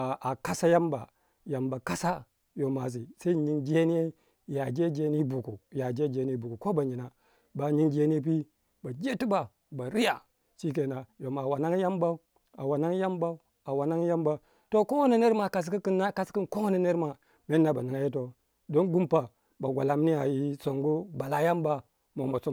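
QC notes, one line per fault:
Nothing stood out on listening.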